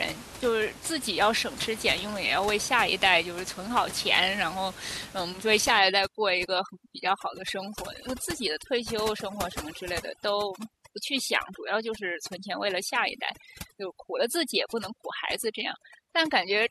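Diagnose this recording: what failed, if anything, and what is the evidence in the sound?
Call processing went wrong from 5.79 s to the end at 16.70 s: an overdone noise removal stage is suppressing far too hard. Before 5.79 s the room noise sits steadily about 14 dB below the speech. After that, the background drops and breaks up into twinkling specks. The suppressor cuts individual frequency bands whenever they come close to its noise estimate, and the quieter speech components go with them.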